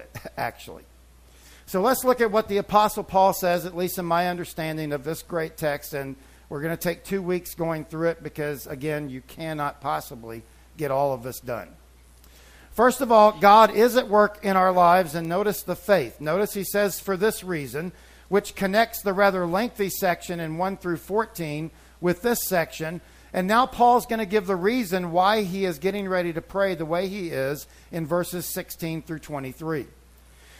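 Bit error spikes at 15.25 s and 25.99 s: flipped bits briefly throw one or two samples to about -18 dBFS and about -24 dBFS, each heard as a sharp, broadband tick.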